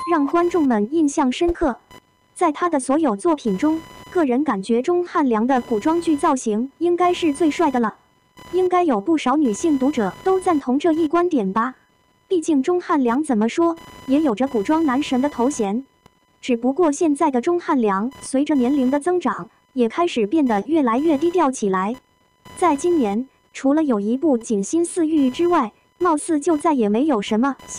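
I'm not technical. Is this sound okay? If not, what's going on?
No. Computer activity noise is leaking in: the computer's changing workload disturbs the electrical ground the audio shares. From start to finish, a fine buzzing chirp, pulsing around a thousand times a second, sits underneath the sound, following the computer's activity rather than the sound.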